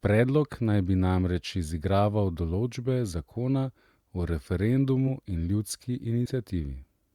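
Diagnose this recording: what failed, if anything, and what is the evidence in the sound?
The codec stage failed. Compressed frames were skipped twice in this speech. At 5.07 s the sound jumps forward by around 40 ms, about four frames. From 6.25 to 6.30 s it jumps again, by roughly 70 ms. The decoder dropped whole frames, either missing or rejected as damaged. The jumps fit a 10 ms frame.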